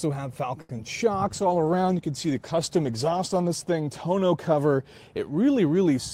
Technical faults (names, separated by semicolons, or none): short stall from a late packet; short concealed packet loss